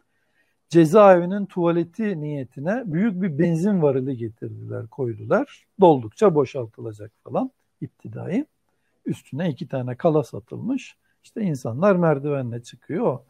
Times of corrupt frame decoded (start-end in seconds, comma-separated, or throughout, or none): 7.88